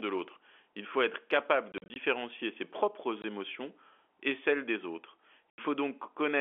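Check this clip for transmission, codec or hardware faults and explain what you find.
There is one fault: packet loss filled with silence. It hits at 1.72 to 1.96 s, 3.22 s, and 5.51 to 5.58 s. The first event scatters 120 ms of gaps over 240 ms. The other two are single holes of about 20 ms and 80 ms. Lost packets were replaced by silence, and the hole sizes fit 20 ms packets. The speech drops out abruptly, with hard edges, over narrow telephone-band G.711 audio.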